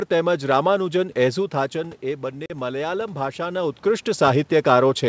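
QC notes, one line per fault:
2.46–2.51 s, packet loss on the ADPCM call: a couple of packets vanish into a hard-edged 40 ms hole, and the desynced predictor brings sound back slightly distorted.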